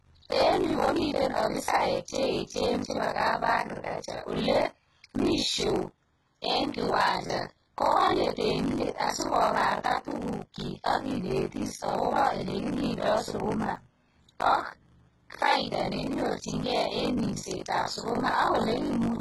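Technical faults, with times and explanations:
Throughout, buffer tearing: a robotic buzz near 50 Hz rides on the speech and drops away in pauses. The write and read positions in the ring buffer have slipped, so roughly half of each period carries audio from about 70 ms earlier, hard-joined on both sides.
Throughout, HE-AAC compression: the treble is artificial, with s sounds gritty and lispy and nothing above 11.8 kHz. This likely comes from low-bitrate HE-AAC, where upper bands are rebuilt by copying lower ones upward, so harmonics fail to align across the crossover.
1.66, 7.27 and 13.75 s, repeated buffer: each is a brief click-like buzz. New audio arrived late, so the device replayed its last block, which fits a 512-sample buffer of about 11.6 ms. It played twice more at the first two points and once more at the third, losing roughly 20, 20 and 10 ms.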